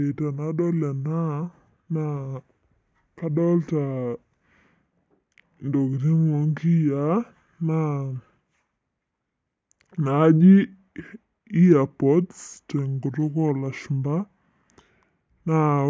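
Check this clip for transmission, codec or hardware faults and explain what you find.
One fault runs through the whole clip: wrong sample rate. Speech plays at two-thirds speed, about 7 semitones low, fitting 24 kHz audio played at 16 kHz. Spectrogram harmonics sit compressed downward; waveform features stretch longer.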